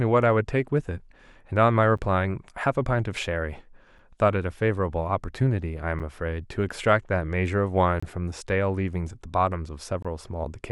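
At 1.97, 3.99 and 5.99 s, then from 8.00 to 8.03 s and from 10.03 to 10.05 s, the speech drops out briefly. Each is a gap between stream segments. The holes fall every 2 seconds, which points to 2-second segments whose time stamps don't quite join. The player fills each gap with silence. The holes last 6 to 26 ms and have hard edges, so they sound like brief, regular dropouts. The last two are longest. No audio is lost.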